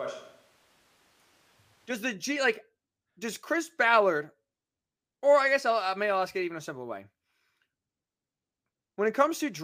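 A switch to a distant microphone is already under way when the clip begins and lasts until 1.90 s. Over that stretch the speech sounds roomy and hollow, with thinner bass and background noise sitting roughly 25 dB below the voice, though its loudness barely differs from what follows. At 1.90 s the sound snaps abruptly to a close, full tone. The likely cause is that the close microphone's feed was missing and a more remote pickup, such as a camera microphone, was used instead.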